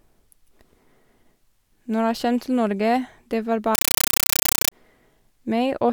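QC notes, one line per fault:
3.75–4.72 s, compressed stream played as audio: after "det var", undecoded Dolby Digital data plays as raw samples, so loud static chatters in 8 ms noise bursts, 31 times a second.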